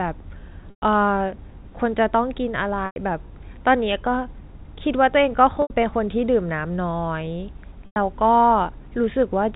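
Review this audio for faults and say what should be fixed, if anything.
Packet loss with pitch repetition occurs at 0.70–0.82, 2.86–2.96, 5.62–5.70 and 7.86–7.96 s, gaps of 80 to 120 ms. The last pitch period repeats, buzzes, then fades toward silence. Larger jitter buffers and forward error correction on the network path would prevent these dropouts.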